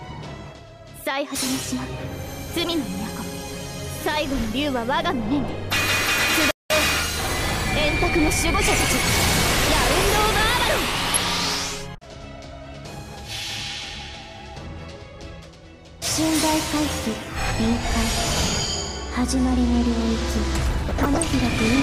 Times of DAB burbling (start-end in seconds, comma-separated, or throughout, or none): 11.14-11.22, 20.86-21.26